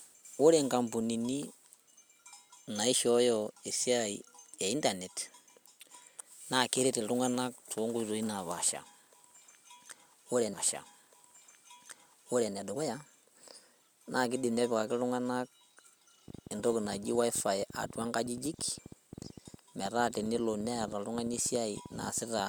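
At 10.53 s a stream segment is repeated. The player queued the same stretch of speech twice. Two seconds play again, through to 12.53 s. A small blip marks the jump back, then the same audio is heard a second time.

From 16.28 s to 22.4 s a train of clicks runs over the speech. Around seventy pulses arrive, about 13.3 per second, at an uneven pace. They tick through pauses too, roughly as loud as the speech. Nearby electrical interference is the likely cause.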